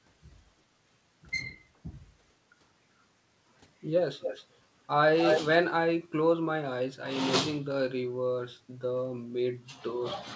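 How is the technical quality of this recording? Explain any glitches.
Two brief glitches stand out in the speech, which comes through a call path that carries nothing above 8 kHz. Echo leak occurs from 4.19 to 4.47 s and again from 5.22 to 5.42 s. A copy of the speech returns 222 ms late. The other side's echo canceller likely let loudspeaker sound reach its microphone and sent it back. The first echo is slightly quieter than the speech. The second is about as loud.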